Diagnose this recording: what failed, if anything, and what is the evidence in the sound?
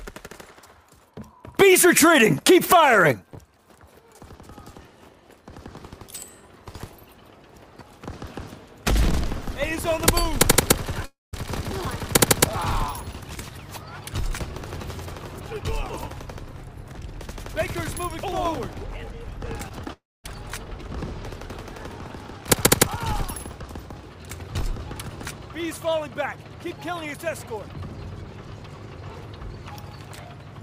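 Long network dropouts at 11.05–11.35 s and 19.93–20.31 s: the sound trails into a fading buzz, then near silence for about 0.18 s and 0.24 s, and resumes with material missing, likely from packets lost in transit. The decaying fill distinguishes this from a hard mute.

Short concealed packet loss at 19.69, 19.84 and 19.88 s, each about 20 ms missing: the decoder extrapolates the preceding sound and blends back, leaving brief smears or wobbles without any silent gap. These cluster just before the 19.93 s dropout, pointing to a degrading network path.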